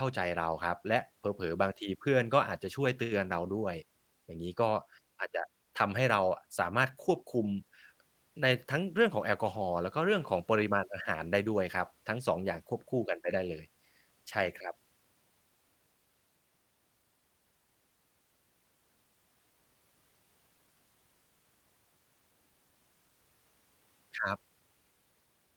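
At 3.03 to 3.14 s there is a short stall from a late packet. The jitter buffer ran empty, so the receiver stretched the last sound by 78 ms until the packet arrived. Nothing is lost, but the speech hangs briefly with a faint buzz or dip.

From 8.56 to 9.61 s a jitter buffer speed-up follows. Excess buffered audio was trimmed by repeatedly cutting pitch-period slices, about 70 ms in total, so the speech runs at 107% speed without a pitch change and sounds hurried.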